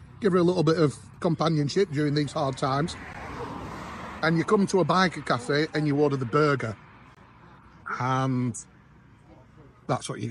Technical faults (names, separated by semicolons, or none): gap between stream segments